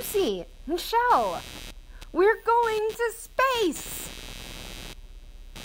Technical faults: computer activity noise

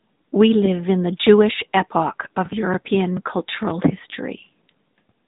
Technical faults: AMR narrowband mobile codec

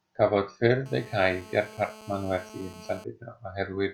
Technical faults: GSM phone buzz

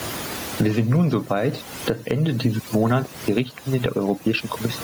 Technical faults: overdone noise removal; gain pumping

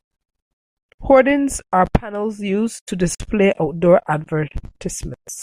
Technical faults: gap at a join of encoded pieces

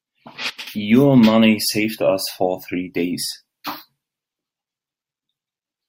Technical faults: sudden gain jump

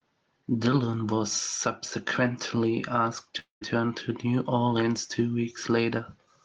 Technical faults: long network dropout

